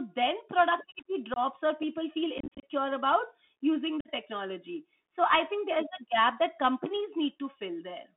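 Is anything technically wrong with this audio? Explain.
Yes. The speech runs over a Bluetooth CVSD headset codec for the whole clip, with unconcealed Bluetooth headset packet loss cutting into it three times.

The CVSD link limits the audio to roughly 250 Hz to 3.6 kHz, with plainly audible codec damage. The coder sends one up-or-down bit per sample at 64 kbps and adapts its step size, so fast, loud high-frequency movement outruns the step and smears. The result is scratchy sibilants and a fine granular hiss beneath the voice. That grainy, slope-overload roughness sets it apart from a clean telephone band-limit, which only narrows the bandwidth.

The packet losses leave holes with hard edges. At 1.34 to 1.39 s about 22.5 ms is gone, which suggests a few lost packets. Between 2.38 and 2.64 s the losses total 150 ms scattered across about 250 ms, with the longest run 37.5 ms, so that stretch sounds chopped and crackly. 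At 4.01 to 4.10 s about 45 ms drops out. Nothing fills the gaps, and the sound briefly resumes quieter, so this is a raw link dropout rather than concealed loss, which would smooth the gaps over.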